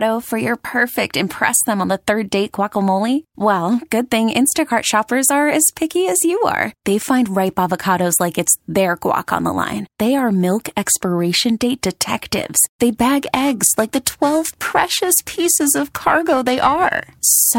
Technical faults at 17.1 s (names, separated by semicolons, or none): periodic clock jitter